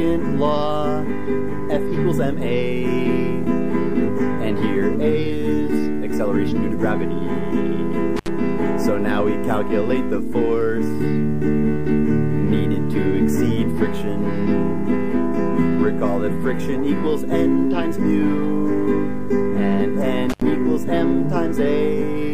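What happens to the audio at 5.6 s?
At 5.6 s the audio carries on intact, with no dropout, click, distortion or other fault at that point.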